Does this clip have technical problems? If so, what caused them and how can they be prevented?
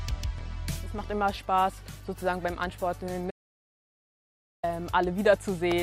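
Yes. An audio dropout to silence runs from 3.31 s to 4.63 s, cutting the sound off mid-flow and bringing it back just as abruptly about 1.33 s later. The gap is silent with no room tone underneath, which most likely means the input was lost, through a disconnected device, a failed link or an accidental mute, while the recorder kept writing silence. Whatever occurred during that stretch is unrecoverable. Securing connections, monitoring input levels live and avoiding mutes during capture would prevent it.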